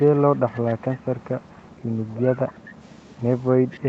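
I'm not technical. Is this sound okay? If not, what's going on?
No, there's an echo leak: a faint copy of the voice trails about a quarter second behind from 0.2 to 1.82 s, and briefly at 2.08–2.16, 2.47–2.54 and 3.71–3.8 s, likely sound from a loudspeaker leaking back into the call.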